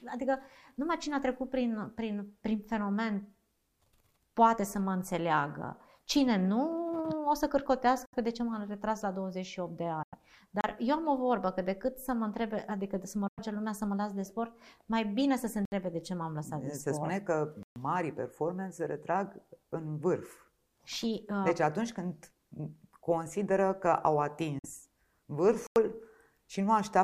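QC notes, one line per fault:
8.05–8.15 s, 10.03–10.15 s, 13.28–13.39 s and 24.59–24.66 s, Bluetooth dropout: audio packets likely failed to reach the headphones in time and were discarded, so output stopped for about 70, 93, 93 and 46 ms, which fits two to four lost frames each time. The sound resumes further along rather than where it broke off, as if it had kept playing through the hole.
10.61–10.64 s, 15.65–15.72 s, 17.63–17.76 s and 25.67–25.76 s, block of digital silence: a run of samples in the output was replaced by zeros, the kind of gap left when a buffer isn't filled in time, lasting about 32, 67, 129 and 92 ms. The signal drops straight to silence and back with no fade. The 32 ms one is a brief pop-like hole, and the 129 ms one is a clear break.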